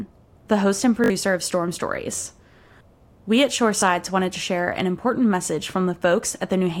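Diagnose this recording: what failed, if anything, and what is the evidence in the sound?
The playback buffer stage failed, producing a repeated buffer in three places. At 1.04 to 1.1 s, just after "the host and", a short fragment repeats three extra times as a quick stutter. At 2.24 to 2.26 s and again at 3.8 to 3.82 s, just before "wanted to share an", one fragment plays twice. Each repeat lasts about 20 ms, which fits a 20 ms buffer. When fresh audio missed its deadline, the device replayed the previous buffer, leaving hard joins and losing around 70 ms of audio at the first stutter.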